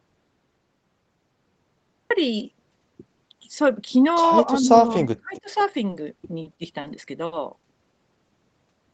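From the start until 2.11 s, the audio is dead silent, with no room tone at all. This audio dropout to silence likely comes from a lost input.

Between 4.46 and 5.51 s, the speech dips by up to about 30 dB for roughly 0.7 s in total. This is likely speech suppressed in double talk by the echo canceller.

From 5.90 to 6.87 s, the speech drags and stutters. Four short stalls hold the last sound, each up to 30 ms. This is a repeated stalls (stutter) pattern, and nothing is lost.

At 7.26 to 7.35 s, a short stall from a late packet stretches one sound by 60 ms. The speech then continues from the same place, with nothing missing.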